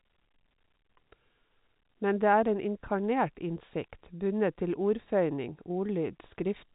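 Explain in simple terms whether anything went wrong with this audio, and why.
Nothing went wrong with this speech recording. It has the narrower, slightly boxy sound of an ordinary landline call because telephone coding passes nothing above about 4 kHz, and that is how the phone system is meant to work.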